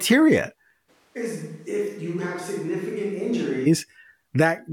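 From 0.90 to 3.65 s speech abruptly turns roomy and thin, about 10 dB quieter over room noise: likely a switch to a distant microphone.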